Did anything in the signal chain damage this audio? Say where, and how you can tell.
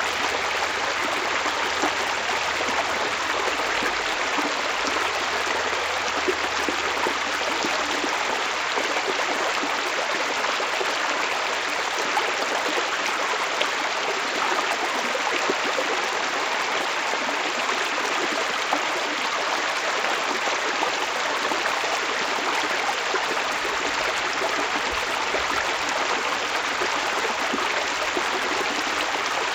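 Yes: the resampler restarted on every block, converting each 10 ms block from 16 kHz to 48 kHz in isolation, so edge errors buzz at 100 Hz throughout.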